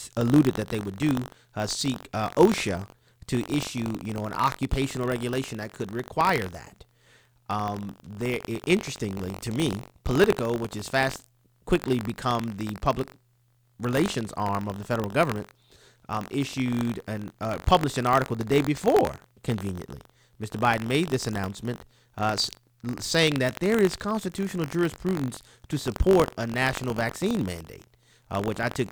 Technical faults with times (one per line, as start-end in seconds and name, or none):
0.00-28.92 buffer tearing